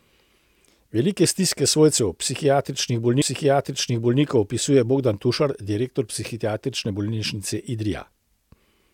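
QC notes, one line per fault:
3.21–4.21 s, stream segment repeated: a full second of speech plays again, adding 1.0 s, with a small blip at the jump back. The player fetched or queued the same segment twice. A buffer stutter would instead loop only milliseconds.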